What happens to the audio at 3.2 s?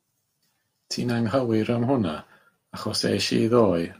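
At 3.2 s the speech runs on intact, with no dropout, click or other disturbance.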